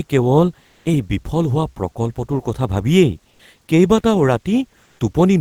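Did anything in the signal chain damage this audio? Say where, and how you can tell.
Yes. Comfort noise replaces the background at 0.71–0.83, 3.31–3.39 and 4.83–4.99 s. It is featureless and up to about 8 dB quieter. The likely cause is Opus DTX in the codec.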